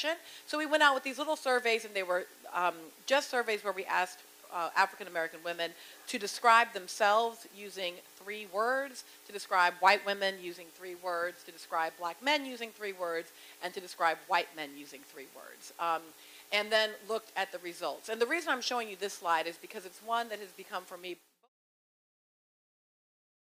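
No technical fault can be heard anywhere in this audio. Near the end the level eases down in a smooth fade out from about 21 s, reaching silence at 21.49 s with no click or hard edge.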